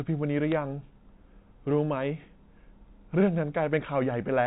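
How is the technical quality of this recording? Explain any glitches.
One brief glitch stands out at 0.52 s, over telephone-band speech that sounds like G.711 coding. The fault is bit errors on a digital phone line. A few flipped bits corrupted individual samples, at a rate well under one percent. A hit on a high bit makes the sample jump sharply, giving a quick tick.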